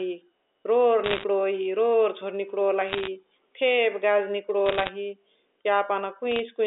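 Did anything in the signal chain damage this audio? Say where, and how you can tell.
Yes. The digital phone line feeding the G.711 A-law path suffered bit errors. Each flipped bit corrupts a single 8-bit sample, and flips landing on the sign or upper bits throw that sample far off, giving sharp ticks. Crackle bursts lie over intact, band-limited speech at 1.04–1.24 s, 2.88–3.08 s, 4.66–4.89 s and, more sparsely, 6.31–6.39 s. The density suggests roughly 1.5 percent of bits hit in the first burst and one percent in the next two, far fewer in the last.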